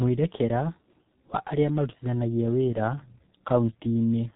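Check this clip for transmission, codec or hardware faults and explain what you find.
The speech carries one codec fault, present for the whole clip. Throughout, there is heavy G.723.1 codec damage: nothing above 3.8 kHz survives, and slow 30 ms frame updates blur consonants into a muffled, hoarse texture, which fits a rate near 6 kbit/s. A simple band limit would sound dull but stay clean, not hoarse.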